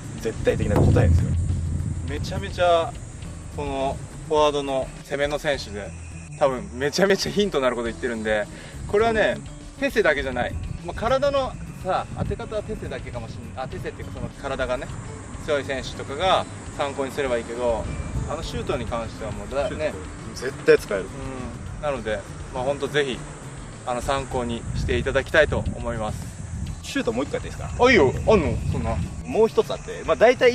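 The audio has an overlap between stream segments, heard as a small click or skip at 1.19, 2.17, 3.18, 4.16, 5.14, 6.12 and 7.10 s, roughly once per second. The one-second spacing fits one-second segments whose time stamps overlap. The player trims the overlap, discarding about 6 to 10 ms of sound that was never duplicated. On a waveform each point shows as an abrupt step where the trace fails to join up, and on a spectrogram as a thin vertical broadband line.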